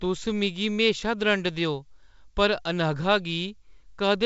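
No technical faults can be heard in this speech.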